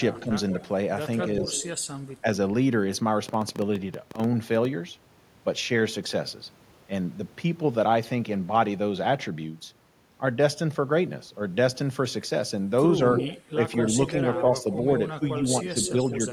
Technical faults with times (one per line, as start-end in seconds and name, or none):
0.15-0.63 echo leak
0.26-0.34 speech suppressed in double talk
1.18-2.14 echo leak
1.41-1.46 speech suppressed in double talk
3.29-4.66 train of clicks
13.18-13.76 echo leak
13.54-15.90 speech suppressed in double talk
14.34-16.15 echo leak